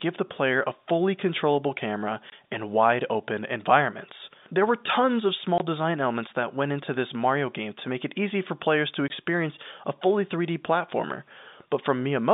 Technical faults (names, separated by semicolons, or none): packet loss filled with silence